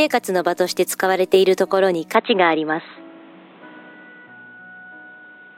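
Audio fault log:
2.15 to 5.58 s, input switched to a poorer device: with no gap, the sound suddenly turns dull, losing everything above 4.1 kHz. The level shifts by about 5 dB and faint new background noise appears, likely because recording moved to a narrower-band microphone.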